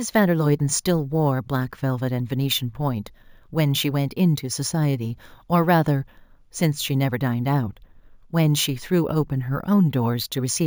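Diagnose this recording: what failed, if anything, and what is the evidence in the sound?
Imaging from sample-and-hold upsampling runs through the whole speech clip. It is a conversion-stage fault: raising 16 kHz audio to 48 kHz by repeating samples without smoothing leaves mirrored speech between 8 and 16 kHz at about 18 dB down, heard as metallic fizz.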